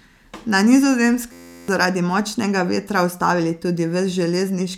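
From 1.32 to 1.68 s, a system hang loop replaces around 0.4 s of speech with one 11.6 ms fragment repeated 31 times, fitting a stalled 512-sample buffer. It sounds like a steady 86 Hz buzz; the waveform shows identical cycles, the spectrogram evenly spaced harmonics.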